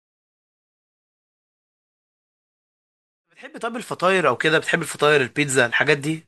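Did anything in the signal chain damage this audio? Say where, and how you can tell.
No, nothing in the chain has damaged this speech audio; the only level change is a smooth fade-in that begins around 3 s and reaches full level at 4.71 s, without any click or hard edge.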